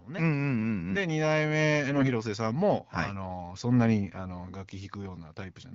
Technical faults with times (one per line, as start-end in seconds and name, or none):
1.88-2.10 AMR bit errors